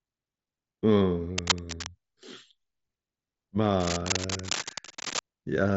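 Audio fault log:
1.38–1.89 s and 3.80–5.20 s, cable scratch noise: dense, uneven bursts of scratching sit only a little below the speech, most likely from a worn cable or connector being moved. Its contact resistance keeps changing, so the noise comes in irregular clusters lasting half a second and over a second rather than as isolated clicks or a steady hiss.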